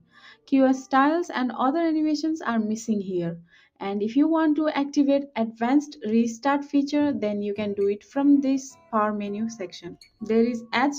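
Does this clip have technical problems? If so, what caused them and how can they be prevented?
Yes. A noise suppressor designed for speech was left running on material that is not speech, so the noise suppressor applied to this sound treats sustained tones, ambience and decays as noise. Throughout the clip its gain keeps moving by roughly 5 dB, so held parts sink while onsets push through. The level pumps and flutters, and tails thin out instead of fading naturally. To prevent this, bypass speech-oriented suppression for music or general sound, or use a broadband denoiser tuned for that material.

The sound cut by the noise suppressor is clearest in four spots: 0.00–0.52 s, with a drop of about 18 dB; 3.41–3.81 s, about 18 dB; 8.71–8.93 s, about 11 dB; and 9.87–10.22 s, about 16 dB. In each spot the suppressor judged a stretch of steady or decaying sound to be noise and clamped it down. 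The result is brief dips where the sound sinks in level or its decay is chopped short. To prevent these dips, turn the suppression strength down or disable the suppressor so it cannot gate non-speech content.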